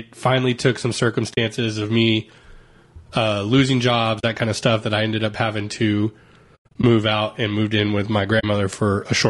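Throughout, the speech is rough and grainy, with noise filling the gaps between pitch harmonics and a thin, synthetic top band. This is likely low-delay AAC compression of the AAC-ELD kind used in video calls, at a rate consistent with about 32 kbps. At so low a bitrate too few bits remain to code the spectrum cleanly between harmonics. The damage is spread evenly over the whole clip, unlike the brief gaps below, which set it apart from a dropout or a one-off glitch.

AAC frame loss with muting occurs four times. At 1.33 s, between "finally took some" and "of me", the sound fades out and back in across about 40 ms, which fits two lost frames whose spectrum the decoder set to zero. The same 40 ms soft hole comes at 4.19 s, after "uh losing jobs" and before "that kind of stuff", and again at 8.39 s. From 6.55 to 6.84 s, between "ended up having to" and "out and moved in", 180 ms goes missing in bursts spread over 280 ms, the longest run lasting about a tenth of a second. 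The overlapping windows round every edge, so there is no repeated or smeared sound, which marks this as muting rather than a hard cut or concealment.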